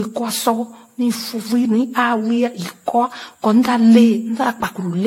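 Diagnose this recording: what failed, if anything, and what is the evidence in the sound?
The codec stage is where it went wrong, and it runs through the whole speech recording. It sounds swirly, smeared and hollow in a way a single AAC-LC pass at something like 64 kbit/s wouldn't explain, and consonant attacks are blurred. That's likely generation loss from about five decode-and-re-encode passes, each quantising on a shifted frame grid so the noise and spectral holes build up.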